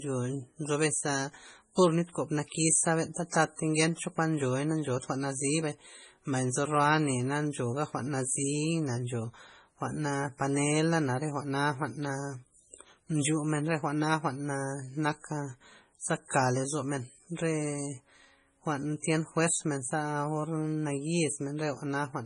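Throughout the speech there is a hard ceiling at 10.5 kHz with a watery, swirling texture and chirpy s sounds, most likely MP3 compression at a very low bitrate around 24 kbps. A plain low-pass filter would dull the top without that flickering, bubbling residue.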